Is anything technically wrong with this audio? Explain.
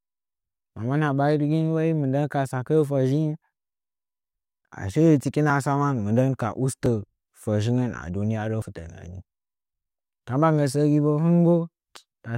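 Yes. At 5.5, 6.86 and 8.62 s the speech jumps ahead, losing about 20, 20 and 40 ms, likely dropped buffers (overrun) where unread samples were overwritten.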